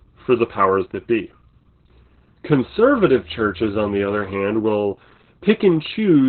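Speech runs the whole clip through heavy Opus voice compression: the sound is muffled and hoarse, slightly robotic, with nothing above about 4.3 kHz. That narrowband ceiling and coarse excitation fit the SILK coder at around 8 kbps. What separates it from a plain low-pass filter or a telephone band-limit is the rough, buzzy texture inside the band, not just missing treble, since the codec is rebuilding the voice from a crude model.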